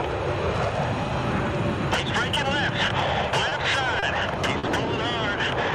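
Short stalls from late packets at 3.49–3.53 s, 3.99–4.04 s and 4.58–4.65 s: the jitter buffer ran dry, so the receiver stretched the last sound by 20, 30, then 50 ms, leaving a held, slightly buzzy moment. Nothing is lost, and playback resumes from the same point.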